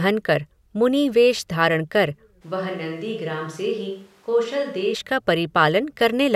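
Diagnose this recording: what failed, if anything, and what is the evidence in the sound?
At 2.43 s, right after "मुनि वेष धारण कर", the speech turns roomy and hollow, loses bass, drops roughly 5 dB, and picks up background noise only about 30 dB below the speech. At 4.93 s it snaps back. The fault points to the analogue capture stage, most likely a switch to a distant microphone: the close microphone's feed dropped out, leaving a farther pickup that hears more room reflection and less of the source.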